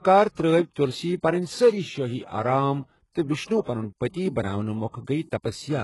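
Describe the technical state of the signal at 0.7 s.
A smeared hiss runs from 0.72 to 0.76 s, just ahead of an attack. This is pre-echo: quantisation noise spread across the codec block fills about 43 ms before the transient. Underneath, the treble sounds gritty and synthetic, with nothing above 11.5 kHz, likely HE-AAC compression rebuilding highs by band replication at a very low bitrate, around 12 kbps.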